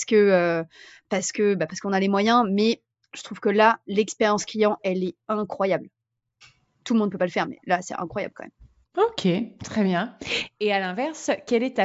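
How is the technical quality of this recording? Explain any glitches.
The technical quality of this recording is good, and there are no glitches to explain.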